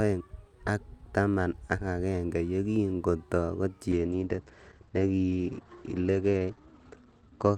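At 3.95 s a call bitrate drop sets in and lasts to the end. The encoder falls from 64 to 10 kbps, staying at the lowest rate for 2.85 s. Coarser coding makes the speech rough and watery. Bandwidth shrinks from 20 kHz to 8 kHz, muffling it.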